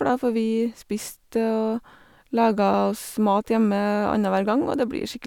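No technical faults can be heard anywhere in this speech recording.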